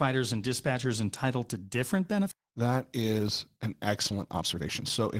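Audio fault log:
2.31 to 2.33 s, skip ahead: Right after "dispatchers entitled to different", the audio jumps forward with no gap filling it, so around a second of sound is missing and the two sides butt straight together. It sounds like the jitter buffer overflowed and threw out a chunk while newer audio was already queued. The playback delay drops by about the same second, and the join is almost seamless apart from the missing material.
2.41 to 3.66 s and 4.11 to 5.03 s, jitter buffer speed-up: In both stretches the pace picks up but the pitch stays put. The first runs at 109% and the second at 129%, so the second sounds noticeably rushed. The receiver was holding more audio than its target and cut short slices of a pitch period or so, over and over, to catch up. That trims out roughly 150 ms in the first run and about 300 ms in the second.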